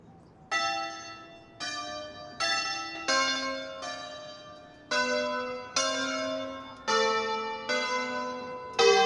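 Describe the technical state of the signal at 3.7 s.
At 3.7 s you're hearing a wrong sample rate fault, and it runs the whole clip. Everything plays back 1.5 times too fast and about 7 semitones sharp, so the sound is hurried and raised a fifth. That fits 16 kHz material played out at 24 kHz without conversion.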